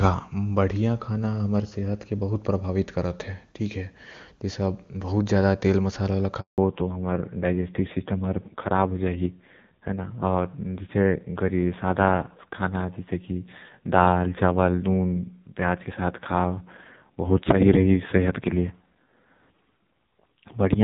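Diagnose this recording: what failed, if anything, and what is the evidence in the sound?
Network stage. A handover gap silences the speech from 6.40 to 6.58 s, about 180 ms. No speech frames arrived while the call switched networks.

Codec stage. At 6.58 s the clear HD Voice sound gives way to a fallback to narrowband. Nothing above 4 kHz remains. The speech turns dull and rough, which points to a low-rate narrowband codec.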